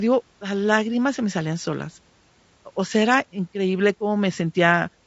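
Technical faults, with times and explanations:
Throughout, low-delay AAC compression. The speech sounds plainly rough and grainy, with noise between the harmonics and a lowered or synthetic top band. The cause is likely AAC-ELD, whose short frames resolve pitch poorly. The damage fits a bitrate near 32 kbps.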